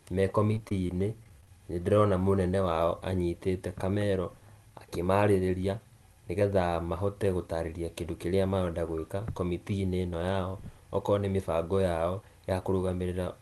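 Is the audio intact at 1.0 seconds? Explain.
No. Repeated packet loss (robotic sound) runs from 0.52 to 1.47 s. Short gaps, up to 27 ms, are patched by stretching earlier sound, leaving choppy, robotic audio.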